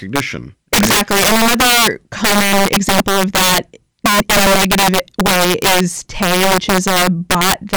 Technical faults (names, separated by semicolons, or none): integer overflow